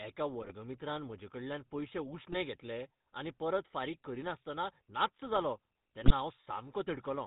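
A speech clip carried through the GSM full-rate codec, whose pulse-driven vocal-tract model leaves a gravelly buzz consistent with 13 kbps coding; a spectrogram shows nothing above 4 kHz. GSM bit errors cause brief squawks and gargles at 0.41–0.53 s (before "म्हजेकडल्यान पयशे"), 2.32–2.37 s (before "घेतले आनी परत फारीक") and 6.01–6.12 s (after "फारीक करीनासतना नाच्च जालो"). Corrupted filter, pitch and gain values show up as smeared spectral bursts and sudden waveform spikes.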